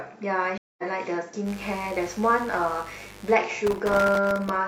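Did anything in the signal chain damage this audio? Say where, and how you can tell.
Yes, three separate problems. The first is at the network stage. There's a stream reconnect from 0.58 to 0.83 s. The speech drops out for about 207 ms, then picks up again at a later point, skipping ahead by roughly a fifth of a second. That jump is the tell. The link dropped, the player went quiet, reconnected and started a fresh decoder mid-stream, so whatever was sent during the outage is simply gone.

Next, from 1.44 to 3.37 s there's mains buzz coming in through the analogue wiring. It's a steady, raspy 50 Hz buzz sitting roughly 20 dB under the speech. That rasp comes from sharp switching spikes, something like a dimmer or rectifier, or an unshielded lead picking them up, twice per mains cycle. Those spikes spray harmonics of 50 Hz well up into the kilohertz range, so it's a gritty buzz rather than a clean hum.

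Last, from 3.67 to 4.56 s there's processor overload crackle at the driver or buffer stage. A gritty tearing rides on the speech for just under a second and then stops. The buffers look tiny, well under a millisecond each, and the CPU blew through dozens of deadlines again and again over that stretch. Each miss left a hard-edged silent gap, and that many gaps strung together sound like continuous crackle until the load eased.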